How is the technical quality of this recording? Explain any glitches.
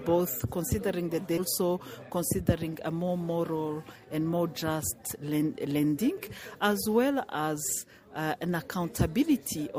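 The recording has one glitch. From 1.37 to 1.42 s the sound jumps abruptly forward with a brief blip, as though part of it is missing. This is likely a stream segment skipped: one chunk of the stream failed to load, so the player skipped it and carried on from the next.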